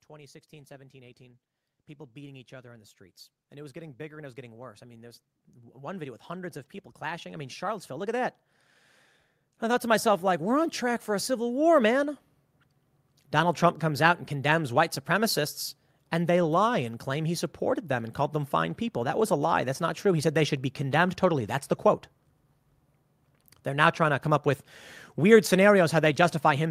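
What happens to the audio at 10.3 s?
At 10.3 s the automatic gain control is partway through an automatic gain rise that runs from 9.45 s to 12.16 s. Having judged the incoming speech too quiet, it steadily turns its own amplification up, by about 7 dB across those 2.7 seconds. Because the boost acts on the whole signal, the speech and the background noise behind it swell together, a gradual climb in loudness and room noise rather than a sudden jump.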